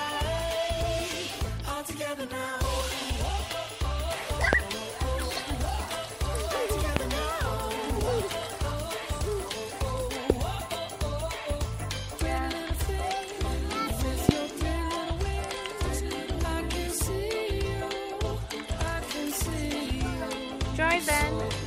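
Loud pops occur at 4.53–4.55 s, 6.97–6.99 s, 10.30–10.32 s and 14.29–14.31 s. Each is a single sharp click peaking some 25 dB above the sound, which continues beneath it. The likely cause is an abrupt voltage step from a switch, plug, static discharge or driver glitch.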